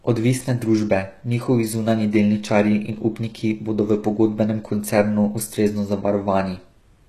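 The encoder likely used HE-AAC compression throughout, coding only the lower spectrum and rebuilding the treble by spectral band replication, which fits a very low bitrate around 16 kbps. The recreated top band is copied upward from lower bands and shaped only coarsely, so its harmonics fail to line up with the real ones. The damage is plainly audible across the speech: s sounds come out gritty and metallic, and nothing is present above about 12.4 kHz.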